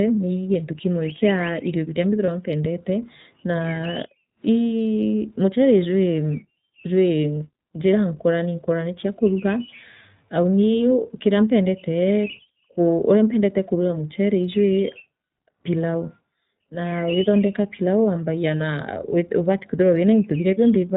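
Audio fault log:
throughout iLBC codec: the speech is narrowband, with nothing above 4 kHz, and sounds a little rough and synthetic, fitting 15.2 kbps iLBC with 20 ms frames.
2.26 s and 12.48 s lost iLBC frames: a 20 ms frame is lost in each case. The decoder fills the gap by repeating the last pitch cycle with noise, giving a brief buzzy held vowel. The voice is right again almost at once because each frame decodes on its own.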